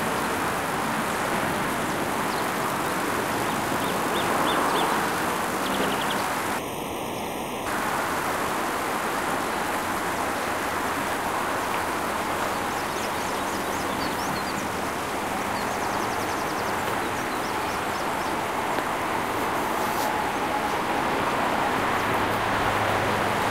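From 6.58 s to 7.66 s the audio turns hollow and phasey. This is channel delay (comb filtering). One channel arrived later than the other by roughly 0.3 ms, and when the two were summed to mono the shared content cancelled at evenly spaced frequencies, with the first notch near 1.5 kHz. On a spectrogram this shows as dark horizontal stripes at fixed frequencies for that stretch. The waveform itself gives little visible sign of it.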